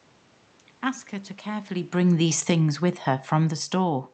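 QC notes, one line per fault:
0.84 to 4.14 s, automatic gain falling: level sinks by about 8 dB with the room noise, gain control easing down after finding the input too loud or its background too strong; waveform envelope tapers steadily.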